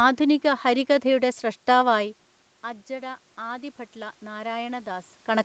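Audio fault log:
2.96–5.14 s, automatic gain rising: after the input level dropped by about 14 dB, the automatic gain control lifted its gain gradually by about 4 dB over some two seconds, so speech and room noise swell together rather than the voice alone recovering.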